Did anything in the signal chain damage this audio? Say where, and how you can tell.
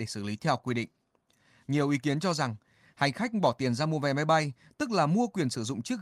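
No, no damage is audible.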